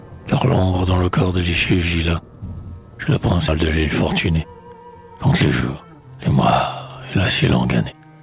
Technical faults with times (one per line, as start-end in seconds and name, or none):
3.48-3.50 skip ahead
4.30-4.96 jitter buffer speed-up
5.78-6.18 jitter buffer speed-up